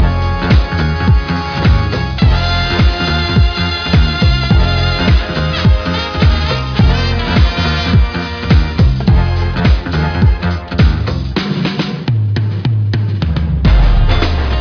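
No technical faults can be heard anywhere in the audio.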